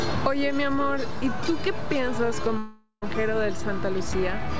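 A DC offset sits under the whole clip, shifting the waveform off zero; you won't hear it, but it eats headroom and parks steady energy at the very bottom. At 2.58 s the sound turns into a fading buzzy continuation that thins to near silence before audio resumes at 3.04 s with a chunk gone, most likely a long network dropout through the G.722 call path, which tops out at 8 kHz.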